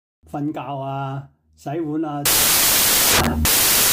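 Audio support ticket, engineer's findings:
Loud, harsh broadband noise from 2.26 s to the end of the clip. Samples built from the wrong bytes: the reader assembles each sample misaligned or byte-swapped, so the rapidly changing low-order bits land in the most significant position and every value becomes effectively random. Probable component: decoder or file reader losing byte alignment at that point.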